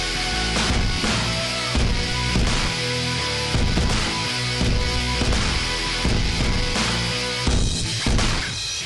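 No technical fault can be heard anywhere in the audio, and the signal holds steady throughout without any interruption or defect worth noting.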